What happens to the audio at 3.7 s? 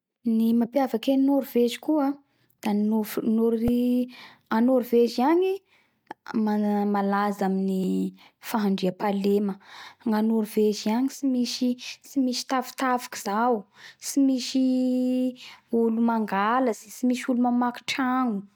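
At 3.68 s a repeated buffer occurs: fresh audio failed to reach the device in time, so it replayed its last tiny block, about 1.45 ms long (which fits a 64-sample buffer), two extra times. The hard joins make a brief click or buzz, and a few milliseconds of speech are lost.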